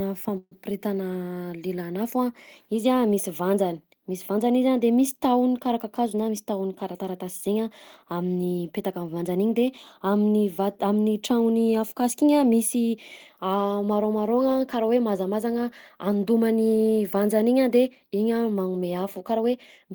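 At 0.37 s the speech stalls in a call audio freeze until 0.53 s, likely from delayed packets draining the jitter buffer. About 140 ms is filled as a fading buzz or hiss continues the last sound, ending in 30 ms of silence. A spectrogram shows smeared, decaying bands before the speech resumes unbroken, now 140 ms late.

Just after "tahony karaha", from 5.85 to 7.56 s, a jitter buffer speed-up trims repeated pitch-period slices, around 150 ms in total. The speech runs about 7% faster at unchanged pitch and sounds hurried. The waveform shows compressed syllables, while spectrogram harmonics stay level.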